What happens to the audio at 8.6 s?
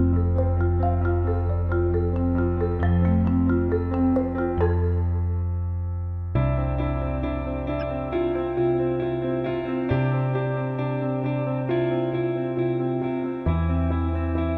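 Nothing goes wrong at 8.6 s: the audio plays through that moment intact, with no dropout, click, glitch or other fault.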